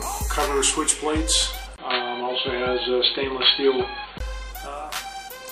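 At 1.76 s the sound drops out for about 20 ms. It then returns dull and boxy, with nothing above 4.4 kHz. The level shifts by a few decibels, and a new, faint background noise sits well beneath the signal. This is likely an input switched to a poorer device. A narrower-band microphone or headset profile took over, bringing its own tone and noise. At 4.20 s the full bandwidth returns and the sound clears.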